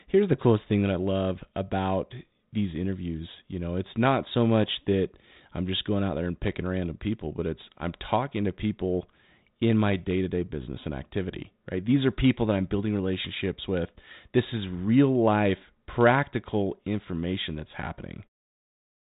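No technical faults can be heard in this speech.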